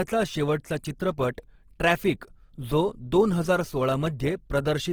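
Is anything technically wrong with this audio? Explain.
Yes. Throughout the speech there is plainly audible Opus compression damage, likely from encoding at a low bitrate in the music (CELT) mode, which fits a rate around 16 kbps. With too few bits, the codec preserves each band's overall energy but fills the detail with folded copies of lower bands or noise, so the voice sounds grainy and rough rather than swirly. A spectrogram shows full bandwidth up to about 20.2 kHz, with few holes but smeared, noise-like texture replacing clean harmonics.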